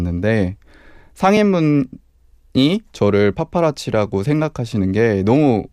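At 1.37 s and again at 4.73 s the speech drops into a block of digital silence, about 2 ms the first time and 2.7 ms the second. The sound cuts out and returns with no fade, so each hole is too short to hear as a gap and comes across as a tick or dip. The second dropout fits a 128-sample buffer that was not filled in time.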